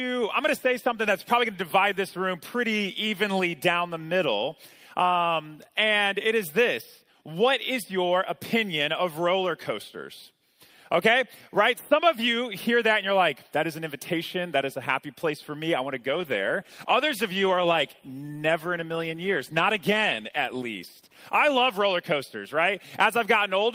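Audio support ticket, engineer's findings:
Call bitrate drop, 16.14 to 21.93 s: audio turns coarse and muffled, sits at its worst for about 5.7 s. Probable component: Opus encoder after a bandwidth-estimate fall, consistent with 48 kbps cut to 17 kbps. Spectrogram: upper band truncated, smeared texture until recovery.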